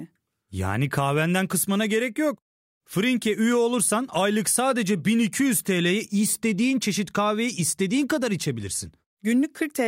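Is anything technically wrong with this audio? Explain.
No, nothing in this speech recording stood out as a technical problem on listening.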